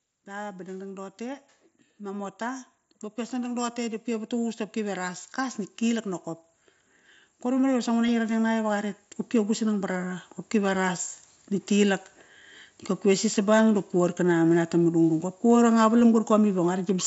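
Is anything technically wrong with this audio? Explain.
Yes, there are two kinds of fault in this speech clip.

Automatic gain rising happens from 0.25 to 2.72 s, from 3.29 to 6.09 s, and from 7.43 to 11.06 s. Each time, the gain control judged the input too quiet and raised its gain step by step, by about 5 dB in the first two stretches and about 7 dB in the third. The voice and background noise swell together over about two and a half to 3.6 seconds, so the level creeps upward rather than jumping.

Concealed Bluetooth headset packet loss occurs at 8.07 s and at 16.0 s. At each point a 7.5 ms gap, consistent with a single lost frame between headset and phone, was filled by repeating the closest-matching piece of the preceding waveform. Because each loss is so short, the patch is almost hidden. The mSBC codec itself is working normally, adding only light wideband graininess.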